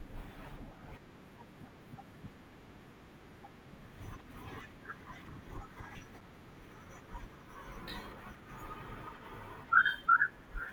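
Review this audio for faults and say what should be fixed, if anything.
A block of digital silence occurs at 6.21 s. The output buffer was likely not filled in time, so the system emitted about 5.3 ms of zeros, which fits a 256-sample buffer. The speech drops straight to nothing and snaps back without any fade, leaving a hard discontinuity at both edges. At this length it is heard as a tick or dip rather than as silence. To prevent it, give the audio thread enough headroom or a larger buffer so it never misses its deadline.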